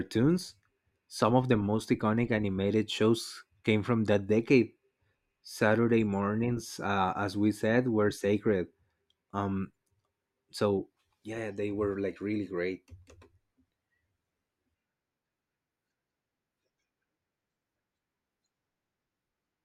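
No technical faults are audible anywhere in the recording.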